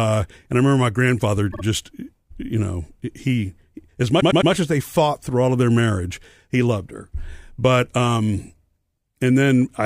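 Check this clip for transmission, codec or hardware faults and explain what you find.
Repeated frames cause two stutters. At 1.50 s, after "remember my grandfather", a 52 ms slice of speech plays twice more. At 4.19 s, after "you know he as", a 105 ms slice plays three more times. A run of compressed frames was sent again, so the decoder replayed it, stretching the audio by about 0.1 s and 0.31 s.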